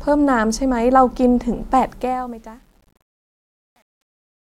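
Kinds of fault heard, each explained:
Truncation distortion on a fade: as the speech fades out, the level stage drops low bits without dither, consistent with a 9-bit word. From about 2.3 s the tail turns gritty. The waveform shows square steps, and the spectrogram shows broadband hash.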